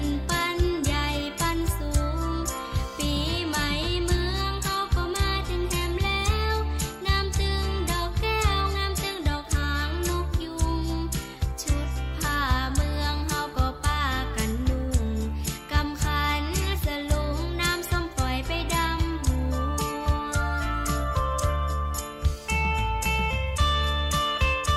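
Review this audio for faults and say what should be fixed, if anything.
Nothing here needs fixing; I listened all the way through and didn't hear a single fault worth flagging.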